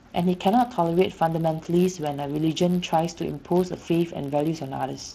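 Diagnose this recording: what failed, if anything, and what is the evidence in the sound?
Buffer stage, block size mismatch (padded): a steady 91.5 Hz buzz runs throughout as each short block is zero-filled, slowing the speech by 0.4% with its timbre unchanged.

Codec stage, Speex: plainly audible CELP coding damage leaves the speech noisy and hoarse, with nothing above 15.2 kHz, consistent with a rate around 22 kbps.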